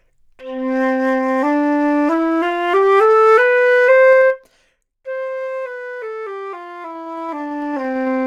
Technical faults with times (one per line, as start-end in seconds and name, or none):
4.09-5.02 zipper noise
6.90-8.10 zipper noise